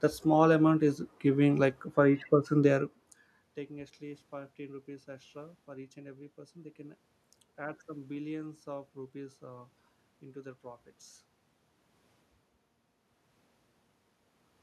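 Nothing here points to a system fault; there's some background noise in the room, and early on, at roughly two and a half seconds, the level shifts as the talker moves relative to the microphone, but both belong to the recording itself.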